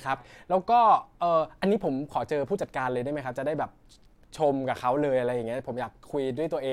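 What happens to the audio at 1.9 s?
Nothing goes wrong at 1.9 s; the audio runs through that moment intact, with no dropout, click, distortion or other fault.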